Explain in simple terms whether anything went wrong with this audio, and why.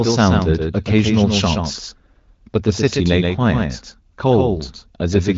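Something did go wrong. From start to finish, the speech is heard twice: a second, somewhat quieter copy trails the original by roughly 150 milliseconds. This is a doubled audio track, most likely from the same sound being picked up a second time along a slower route. Unlike a room echo, the copy doesn't fade away in repeats or sound roomy; it's one clean duplicate at a fixed delay. The slightly muffled, phone-call quality comes from the HD Voice call coding and is normal.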